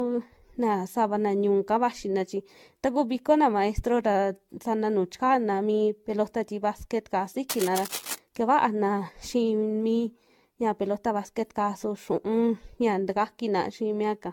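From the start to the end, the speech carries generation loss: a swirling, hollow coloration with smeared consonant attacks, more damaged than a single lossy encode at a moderate bitrate would leave. This most likely comes from the audio being decoded and re-encoded something like fifteen times, with each pass requantising on a shifted frame grid so that noise and spectral holes pile up. The character fits a repeated AAC-LC chain at around 96 kbit/s.

From 7.49 to 8.18 s, just after "mi pelota ti basquet'ka", cable scratch noise appears as a dense, uneven burst of scratching and rustling laid over the speech for about 0.7 s. It sits only a few dB below the speech, so it is prominent. The likely cause is a worn cable, connector or control being moved, with its contact resistance jumping rapidly and injecting irregular noise into the signal path.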